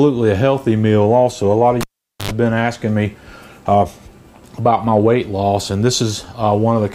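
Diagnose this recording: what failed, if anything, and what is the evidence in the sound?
A pop at 1.81 s drops the sound to near silence for about 0.45 s, with a 0.09 s burst of 50 Hz mains buzz and a second pop as the sound returns at 2.31 s. This is a cable pulled and plugged in, an analogue wiring fault.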